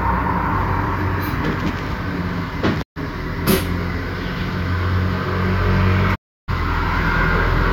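Digital broadcast dropouts hit this recording of sounds at 2.81 to 2.98 s and 6.14 to 6.50 s: the receiver lost frames, faded to silence within 20 ms, and skipped 128 ms and 320 ms of audio.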